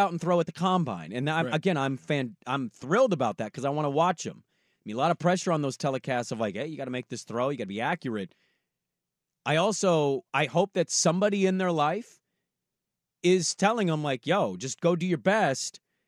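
No technical faults can be heard anywhere in the speech. There is no moment in the recording that calls for a time mark.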